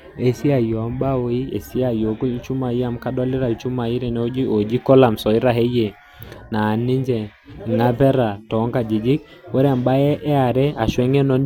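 No dropouts, glitches or distortion can be heard anywhere in the speech recording, so there is nothing to flag.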